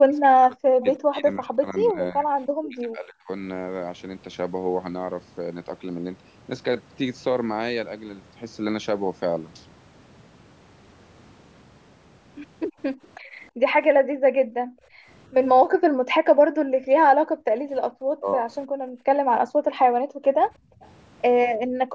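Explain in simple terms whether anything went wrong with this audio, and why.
Three problems typical of a speakerphone call can be heard in this speech recording.

Speech suppressed in double talk: from the start to 3.29 s, the voice repeatedly sinks or nearly vanishes, for about two seconds in total. It happens again between 17.66 and 18.53 s, for under half a second, and as a brief, milder dip at 21.67–21.74 s. The likely cause is both parties talking at once. The echo canceller could not tell this talker apart from the loudspeaker sound, so it turned everything down.

Echo leak: short, faint repeats of the voice slip through at 0.81–0.85 s, 13.04–13.08 s and 20.83–20.89 s. Each arrives about 320 ms after the original, and the later two are very quiet. This is likely the far end playing the call on a loudspeaker. Its echo canceller failed to remove every bit of what its microphone picked up, and the leftover was sent back.

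Background gated by the echo canceller: between 13.18 and 17.38 s, the room sound behind the voice drops away almost completely, for about three seconds in total. It does so again between 18.79 and 20.82 s, for about one and a half seconds. While the loudspeaker was playing, the canceller clamped the microphone down hard, and the background only returned when it relaxed.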